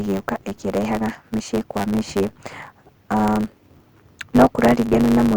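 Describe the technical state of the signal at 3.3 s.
At 3.3 s the speech is affected by a block size mismatch (truncated), which runs through the whole clip rather than starting or stopping near that point. One stage hands on longer blocks than the next stage takes in, so the tail of every block is discarded. The regular jumps where blocks are spliced produce a buzz at 100 Hz, the block rate, and the speech plays about 1.09 times too fast while keeping its timbre.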